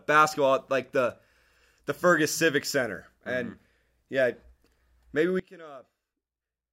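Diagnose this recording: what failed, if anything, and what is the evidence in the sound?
A sudden gain jump at 5.40 s drops the level by about 22 dB and holds it there to the end. Speech and background noise fall together in a single step, with no fade, likely a digital gain setting applied without a ramp.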